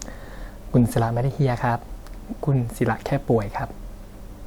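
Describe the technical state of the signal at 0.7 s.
At 0.7 s the speech signal is intact, with no audible fault at that moment.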